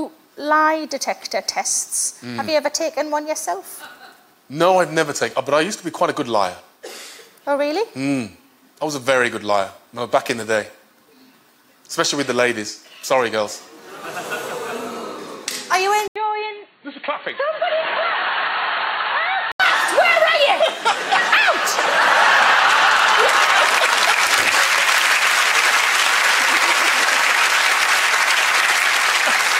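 At 16.08 s the sound drops out for 80 ms, then returns dull and boxy, with nothing above 4.4 kHz, about 5 dB quieter and over a new background noise roughly 40 dB below the signal. At 19.60 s it clears again. This is likely an input switched to a poorer device. A plain filter or codec bandwidth change would narrow the band alone, whereas here the tone, level and noise floor all shift together after a gap.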